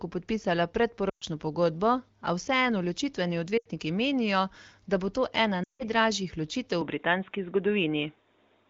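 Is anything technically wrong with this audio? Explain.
Yes. There are two kinds of fault.

Lost AMR speech frames at 1.10 to 1.24 s, 3.58 to 3.67 s (between "vseeno ločitveni" and "menijo da bo") and 5.64 to 5.83 s. Corrupted frames forced the decoder to repeat its last good pitch and vocal-tract settings at falling gain. For 120, 80 and 160 ms respectively, the speech smears and fades before recovering roughly.

Input switched to a poorer device from 6.81 s to the end, with no gap at the switch. The likely cause is a change to a narrower microphone path. Nothing above 3.8 kHz survives, so the wideband AMR sound turns dull and boxy, with a level shift of about 5 dB.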